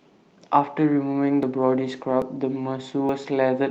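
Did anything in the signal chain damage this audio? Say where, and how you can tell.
Yes. From 1.21 s to the end, the call bitrate drop hits at the codec stage: Opus falls from 48 to 18 kbps, bottoming out for about 1.1 s. The speech turns rough and watery and loses its top end as bits starve.

Dropped buffers (overruns) at the driver or buffer stage show up as jumps at 1.43 s and 2.22 s, each skipping a tiny slice, and at 3.09 s, a noticeably longer chunk. That's likely the capture side not reading before the hardware overwrote its samples.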